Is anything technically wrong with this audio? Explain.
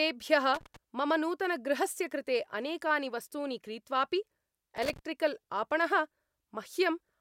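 Yes, there's loose connector crackle in two bursts, 0.54 to 0.76 s just before "मम नूतनगृहस्य कृते अनेकानि" and 4.77 to 4.99 s right after "कृते अनेकानि वस्तूनि क्रीत्वापि". A worn contact is flickering open and shut, chopping the speech into irregular scratchy crackle.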